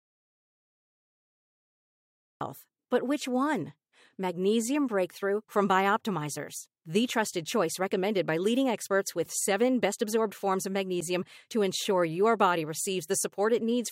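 A speech recording that opens on an audio dropout to silence: from the very top through to about 2.41 s there's nothing but silence, no room tone, no hiss, and then the speech comes in already under way. So the gap started before the file did. Most likely the input was lost for those first couple of seconds, through a loose connection, a dropped link or a mute left on, while the recorder kept writing empty samples, and whatever was said then is gone.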